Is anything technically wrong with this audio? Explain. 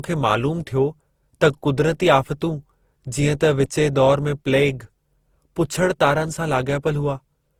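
Yes. Throughout the speech there is generation loss, likely from about seven passes through Opus near 48 kbit/s. Each re-encode adds fresh quantisation, so the sound is swirlier and more hollow than one pass at that rate, with blurred attacks.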